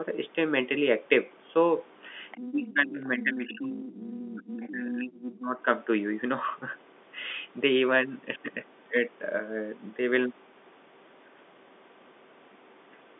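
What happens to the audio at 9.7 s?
Nothing goes wrong at 9.7 s: the speech carries on intact through that moment, with only the narrow telephone band heard across the rest of the clip.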